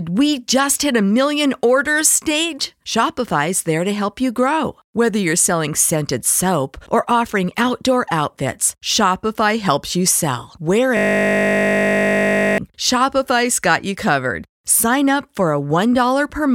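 Just after "helps you sell", from 10.97 to 12.58 s, a system hang loop takes over. The playback stalled while the audio hardware kept replaying the same 20 ms stretch of its ring buffer, about 80 times in a row. That short repeat at 50 Hz is heard as a steady, flat buzz. On a waveform the segment is one identical 20 ms shape tiled end to end. A spectrogram shows rigid horizontal lines at 50 Hz and its harmonics, with no movement, until the sound abruptly resumes.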